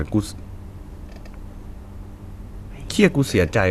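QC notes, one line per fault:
No faults heard in this speech clip.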